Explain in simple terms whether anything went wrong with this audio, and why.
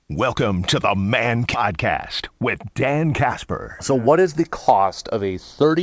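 Three things went wrong in this speech recording.

Throughout the clip the two channels are drifting apart. The left and right sides were recorded on devices whose clocks ran at slightly different speeds, so the tiny delay between them keeps growing, to a fraction of a millisecond by the end. Played as mono, this gives a slow, sweeping flanging sound. A fixed delay would instead cause a static hollow tone.

At 1.54 s there is a skip ahead. About 0.4 s of speech is simply missing, and playback jumps straight to later audio with no silence or filler at the join. A dropout would leave a gap, but here the sound just leaps forward.

From 1.71 s to 5.77 s there is a jitter buffer speed-up. The receiver was holding too much audio and cut many tiny slices to catch up, removing about 0.2 s in total. The speech runs about 6% fast but keeps its normal pitch, so it sounds hurried rather than chipmunk-like.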